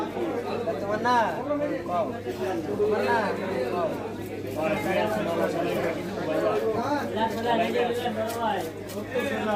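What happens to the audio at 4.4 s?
Nothing goes wrong at 4.4 s; the audio runs through that moment intact, with no dropout, click or other fault.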